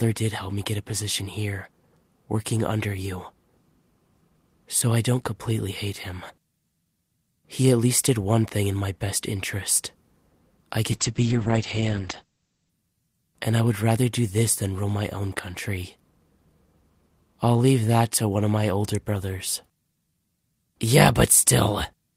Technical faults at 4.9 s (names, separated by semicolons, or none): none